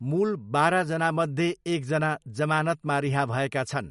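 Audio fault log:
Throughout: MP3 compression, likely at a low bitrate of around 55 kbps. Short on bits, the encoder drops all treble above 11.2 kHz and switches weak frequency lines on and off between frames, leaving the speech dull, watery and swirly, with plainly audible smeared consonants.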